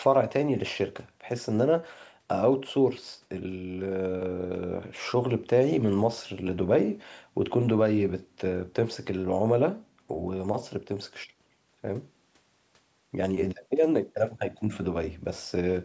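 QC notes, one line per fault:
No faults found in the speech. The call microphone processing shows as a band with nothing above 8 kHz and the lowest bass trimmed away, as expected for that path.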